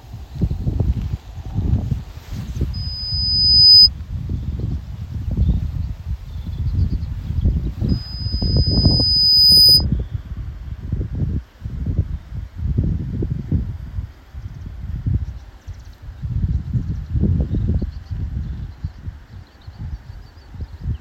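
At 2.73 s a loudspeaker feedback squeal begins. A single tone near 5 kHz swells over about a second until it sits roughly 15 dB above the sound. It cuts off at 3.89 s. The same 5 kHz tone returns at 7.89 s and builds more slowly, over about a second and a half, before stopping at 9.85 s. Both times a microphone was picking up its own loudspeaker, and the loop gain exceeded one at that frequency.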